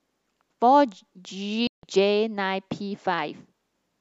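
A Bluetooth dropout runs from 1.67 to 1.83 s, where the speech falls silent for about 160 ms. Audio packets likely reached the headphones too late and were discarded, so playback resumes after the gap as though the speech had carried on through it.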